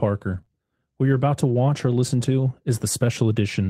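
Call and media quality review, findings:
Lost packet rebuilt from error correction, 0.33–0.39 s: roughly 40 ms of rougher, noisier sound with no gap, which fits two separate 20 ms packets each replaced by the low-bitrate redundant copy carried in the following packet (Opus in-band FEC) at the decoder. Distinguishing mark: the sound stays continuous and tracks the real signal, only coarser. It is degraded detail, not a smear of the preceding sound.

Short concealed packet loss, two back-to-back holes at 0.41–0.45 s and 0.45–0.49 s, each 20 ms missing: brief smear or wobble where the receiver's concealment extended the last sound, pitch-based if voiced and shaped noise if not, then crossfaded into real audio. Component is the jitter buffer or PLC. Unlike the FEC stretch just before, this content is invented rather than a coarse copy, so the real detail is gone.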